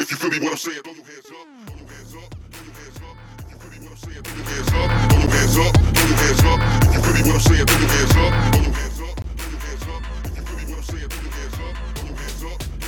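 From 3.99 to 4.92 s the level changes by roughly 25 dB in 2 dB stairs, about fifteen a second, with no smoothing. That is zipper noise: each step clicks, giving a ticking texture. The waveform envelope shows a staircase, and the spectrogram shows faint vertical lines at each step.

Blocks of digital silence fall at 4.27 s (5.3 ms, which fits a 256-sample buffer), 5.27 s (10.7 ms, fitting 512 samples), 9.22 to 9.24 s (21 ms, fitting 1024 samples) and 10.90 s (3.5 ms). The output buffer was likely left unfilled, so the signal snaps to zero and back, giving ticks and a brief hole. Each appears as a flat line in the waveform and a full-height vertical stripe in the spectrogram.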